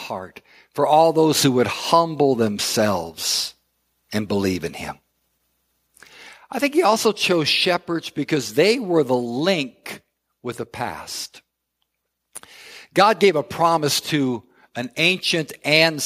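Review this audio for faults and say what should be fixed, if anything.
Nothing stood out on listening to this speech recording, so there is nothing to fix.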